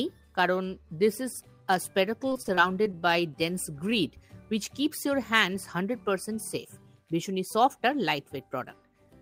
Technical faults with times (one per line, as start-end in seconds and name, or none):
2.29-3.03 repeated packet loss (robotic sound)
2.81-3.36 jitter buffer slow-down